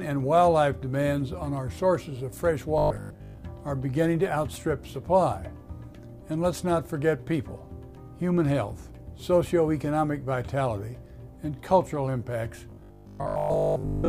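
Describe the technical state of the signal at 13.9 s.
At 13.9 s there is robotic sound from repeated short buffers, running from 12.70 s to 14.09 s. Most of the audio becomes a rigid, metallic 50 Hz buzz, likely from a 20 ms stretch replayed while new audio lags. Unlike steady mains hum, it still tracks the sound's rough contour.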